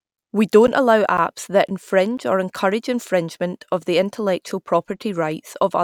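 From 0.17 s to 2.19 s, something blocks the USB bus or audio driver every 0.5 s. These periodic USB or driver dropouts each replace roughly 10 ms of speech with silence, heard as about five evenly spaced ticks, ending just before "or encourage infringement of".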